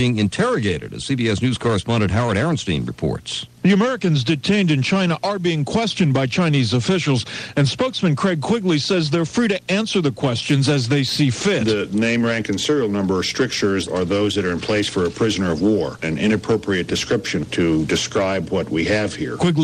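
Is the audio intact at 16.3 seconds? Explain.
Yes, the audio at 16.3 seconds is intact, with no dropout, click, distortion or other technical fault at that moment.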